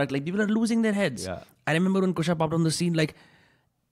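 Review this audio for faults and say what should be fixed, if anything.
Nothing here needs fixing; no faults are heard.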